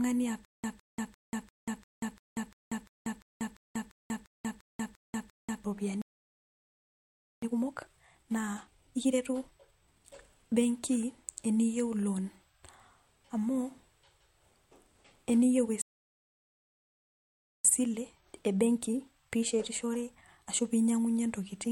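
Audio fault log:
0.45–5.64 s, stutter with silent gaps: a 158 ms fragment of the speech repeats 15 times at a steady 346 ms period, each burst followed by about 189 ms of digital silence. The most likely cause is a stalled stream replaying its last buffer at every retry. Unlike a plain stall, the same burst keeps returning, and the speech from that stretch never arrives.
6.02–7.42 s and 15.82–17.65 s, playback stall: the speech stops mid-flow and the output goes silent for 1.41 s, then for 1.83 s. No fragment repeats in these gaps, so each one is a single dropout, likely a player starved of data until it recovered.
7.42–10.22 s and 17.65–20.65 s, time-compressed catch-up: after each stall the speech runs hurried, at 1.5× and then at 1.15×, before "pee inyang'unyie" follows. Small pieces are cut out and cross-faded to clear the backlog, so pitch stays normal, unlike a resampling speed-up that would raise it.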